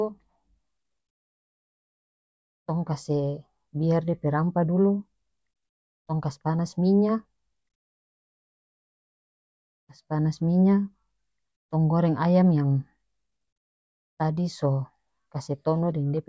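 No technical faults can be heard anywhere in the recording.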